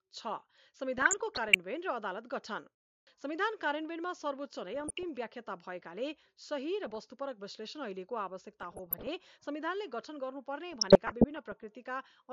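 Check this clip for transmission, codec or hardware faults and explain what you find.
There is one recurring fault, DAB burbling, at 0.98–1.56 s, 4.74–5.03 s, 6.83–7.12 s, 8.61–9.07 s and 10.72–11.64 s. Bit errors of around 0.3 to 0.5 percent slip past error correction and corrupt the MP2 sub-band data, giving short blips of noise in single sub-bands. On a spectrogram, isolated frequency bands flash brighter in short blocks.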